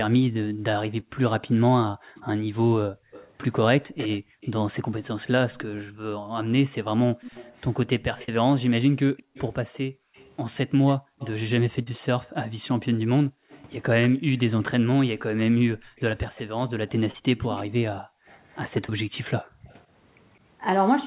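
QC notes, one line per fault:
0.52–4.41 s, 9.23–11.19 s, 13.28–15.93 s, 18.00–19.68 s: background gated by the echo canceller. While far-end audio played, the canceller clamped the microphone, so the room sound drops by up to about 40 dB for roughly half to three-quarters of a second in each span, then recovers when it releases.
1.00 s, 8.24–8.29 s, 11.83–11.87 s, 17.11–17.15 s, 18.86–18.89 s: short concealed packet loss. Between 10 and 40 ms went missing each time. The decoder extended the preceding sound to fill each gap and blended back, giving a brief smear or wobble where a short consonant may thin out.
2.16–11.40 s, 13.49–14.40 s, 15.96–19.74 s: echo leak. A faint delayed copy of the speech trails behind it, 209 ms late in the first span and 182 ms in the later two. It sits around 15 to 25 dB below the speech. This is likely loudspeaker pickup that the canceller left incompletely removed.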